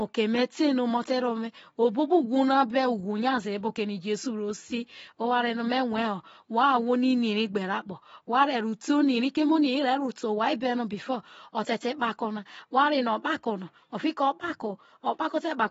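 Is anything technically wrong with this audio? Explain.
Yes. Throughout the speech there is AAC compression: nothing above 7.6 kHz, dull smeared sibilants and warbling, likely AAC-LC starved of bits, consistent with about 24 kbps.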